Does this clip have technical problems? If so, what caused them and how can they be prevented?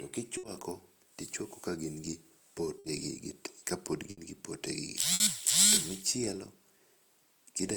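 Yes, four bursts of packet loss, at 0.37–0.46, 2.78–2.87, 4.10–4.20 and 5.14–5.23 s: each holds the last sound as a fading buzz or hiss for about 60–70 ms instead of silence, then skips about 60 ms. A steadier network path or a larger jitter buffer would prevent it.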